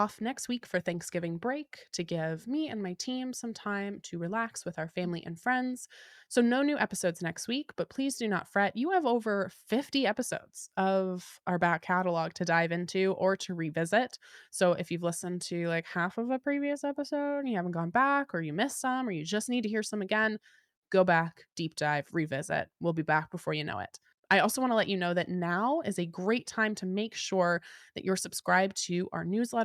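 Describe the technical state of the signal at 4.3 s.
At 4.3 s the speech signal is intact, with no audible technical fault at that moment.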